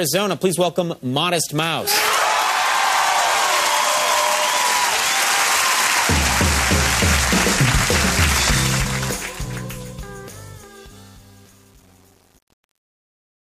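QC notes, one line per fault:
8.48–13.59 s: truncation distortion on a fade. The fade is requantised without dither, so the decaying waveform falls onto a few coarse steps and gains grainy distortion that follows the signal. It is worst from 9.14 s to the end, which fits an 8-bit stage.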